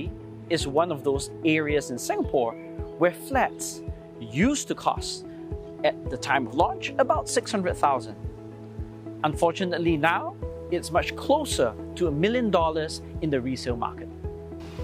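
No technical faults can be heard in this clip, so there is nothing to place in time order.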